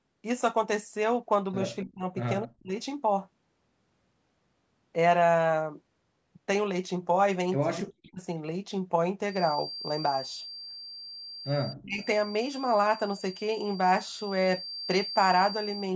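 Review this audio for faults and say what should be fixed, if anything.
The echo canceller likely failed to tell near-end speech from loudspeaker echo during double talk. It turned the speech down by around 30 to 40 dB at 1.84–2.04, 2.44–2.75, 7.81–8.21 and 11.73–12.01 s, so the speech is suppressed in double talk at each of those points.

A feedback whistle runs from 9.24 s to the end. The loudspeaker-to-microphone loop was likely held just below runaway, leaving a thin 4.7 kHz tone that swells and fades slowly, roughly 15 dB under the speech.

To prevent both, improve double-talk detection in the echo canceller and lower the loudspeaker gain or add acoustic separation so the loop stays well short of feedback.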